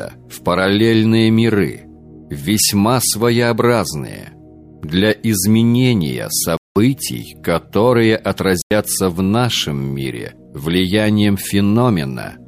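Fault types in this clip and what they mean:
Corrupt frame muted: bit errors damaged compressed frames so badly that the decoder rejected them, and the player substituted silence instead of sound while keeping the timeline intact. Here the audio drops out abruptly twice, from 6.57 to 6.76 s (about 0.19 s) and from 8.60 to 8.71 s (about 0.11 s). Each gap is a hole whose length fits two lost frames, after which the sound resumes exactly on time.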